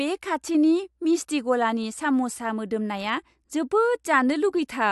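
Speech, with nothing technically wrong to report.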